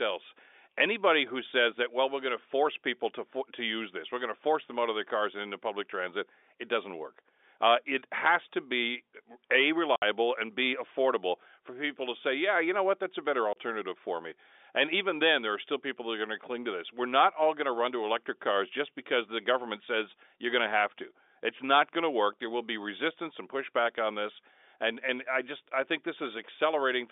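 At 9.96 to 10.02 s, between "has to be a" and "and b affordable for", packet loss filled with silence cuts a 60 ms hole, which fits two 30 ms packets. A single 30 ms gap follows at 13.53 to 13.56 s, after "what that's a better", before "for me". Both gaps have hard edges within the band-limited G.711 telephone sound.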